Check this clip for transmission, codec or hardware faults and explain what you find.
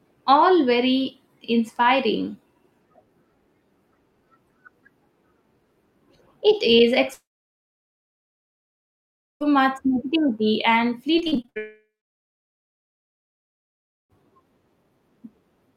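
Network faults are present: two long dropouts and a short burst of repeated packet loss.

From 7.13 to 9.42 s there is a long network dropout, likely from a stalled stream. The last sound is stretched into a fading buzz, then about 2.2 s of near-silence before audio resumes at "much negativity and".

From 11.18 to 11.58 s, right after "much negativity and", repeated packet loss produces eight short gaps, the longest 59 ms. Concealment patches about half the span, giving choppy, robotic sound.

From 11.58 to 14.12 s a second long network dropout follows, likely the stream stalling again. A brief fading fill leads into roughly 2.2 s of silence, and the missing audio never returns.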